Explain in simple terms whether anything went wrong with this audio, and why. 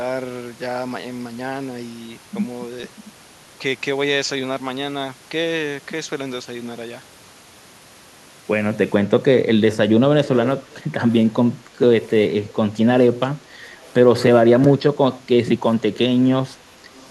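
Yes. Around 10.25 to 10.49 seconds, a delayed copy of the speech comes back, about half a second late. More brief scraps follow at 10.71, 12.47, 13.73, 15.94 and 16.95 seconds. This is echo leak. It was likely caused by a loudspeaker call whose echo canceller let some sound slip through.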